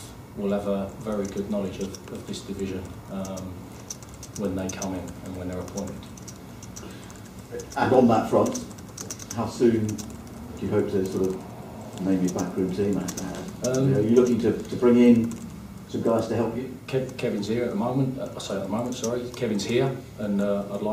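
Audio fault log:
No faults heard.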